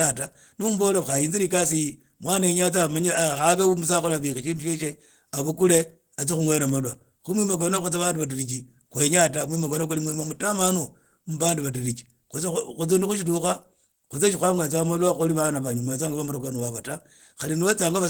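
From start to end the speech sounds hoarse, grainy and muffled, with plainly audible roughness. That is likely Opus compression working in its hybrid speech mode at a rate fitting roughly 16 kbps, with the band still reaching about 20.2 kHz.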